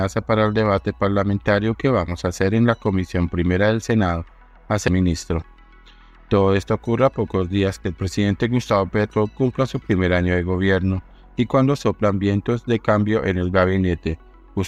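At 4.88 s, a brief blip marks damaged data in the compressed stream. Corrupted bytes made the decoder misread a frame and lose sync momentarily.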